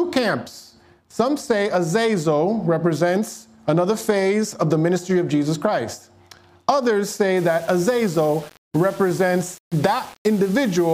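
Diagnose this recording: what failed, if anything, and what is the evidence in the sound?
From 7.37 s to the end at 10.94 s, the sound turns grainy, with distortion that tracks the signal. This is likely low bit depth without dither at a sample-format conversion: values rounded to about 6 bits, leaving error roughly 25 dB below signal.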